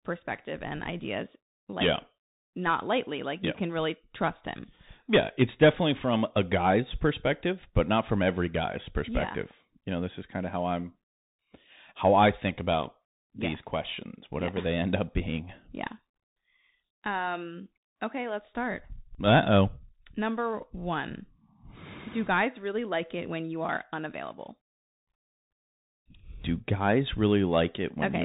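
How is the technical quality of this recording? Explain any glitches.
The speech sounds muffled and narrowband throughout, with scratchy sibilants, gritty distortion on loud bright moments and a grainy hiss underneath. That points to the Bluetooth CVSD headset codec, whose adaptive one-bit up/down steps, at a rate that fits 64 kbps, remove everything above 4 kHz and lag behind sharp changes.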